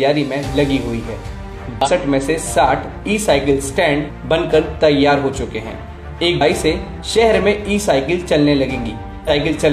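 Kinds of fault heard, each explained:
Damaged data in a compressed stream: four brief garbled blips of 47 to 70 ms, where corrupted bytes made the decoder misread frames and lose sync.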